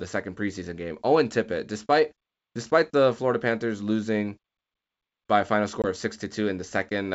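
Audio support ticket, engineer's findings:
Packet loss on ADPCM call, 5.82–5.86 s after "by a final": hard 20 ms silent hole, about one packet. Speech returns with brief slight distortion as the G.722 predictor and step size re-converge.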